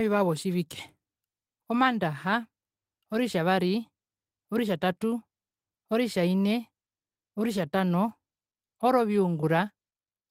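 Nothing in the speech stood out as a technical problem on listening.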